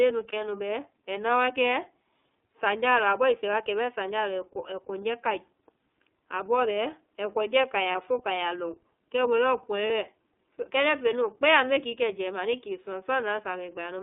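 Throughout, the speech carries the iLBC codec's signature. The band is confined to roughly 300 Hz to 3.5 kHz, and each frame's excitation is coded independently, giving a plainly audible rough, slightly synthetic texture consistent with iLBC at about 13.3 kbps.

Lost iLBC frames occur at 0.30, 7.92 and 9.87 s, each about 30 ms, which fits a single dropped frame. The decoder fills each gap by repeating the last pitch cycle with added noise, a brief buzzy held vowel, and the voice is right again almost immediately afterward.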